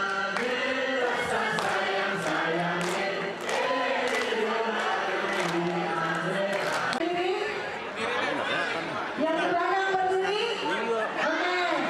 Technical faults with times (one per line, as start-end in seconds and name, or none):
none